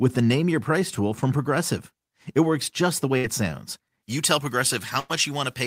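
At 3.17 to 3.26 s, a burst of packet loss left the receiver without audio. It filled about 62 ms by continuing the last sound and fading it down, then resumed with roughly 60 ms of the original skipped, so the audio jumps forward.

From 4.03 s to the end, pre-emphasis was left on. A treble boost, consistent with a J.17 curve, was applied without the matching de-emphasis, leaving the high frequencies about 11 dB too strong at 10 kHz relative to 1 kHz. The speech turns thin, bright and sibilant.

Within that section, at 5.00 to 5.11 s, a second burst of packet loss produces a longer concealment of about 98 ms, the held sound fading out before playback resumes with about 100 ms missing.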